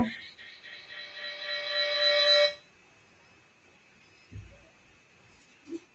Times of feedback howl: 0.38-2.78

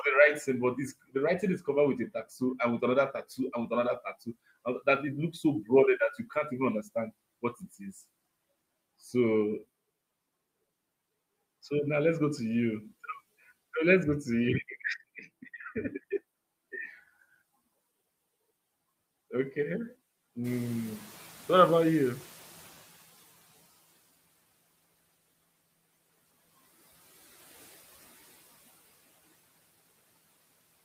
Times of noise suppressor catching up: 20.44-23.57

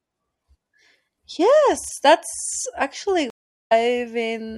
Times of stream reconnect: 3.30-3.72

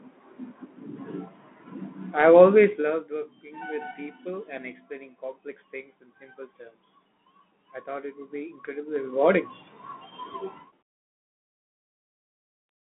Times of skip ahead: none

